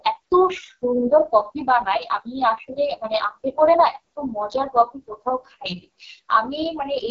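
Rough, raspy speech runs throughout with nothing above 7.5 kHz, the heavy damage of AMR wideband (HD Voice) coding at what sounds like its lowest 6.6 kbit/s rate.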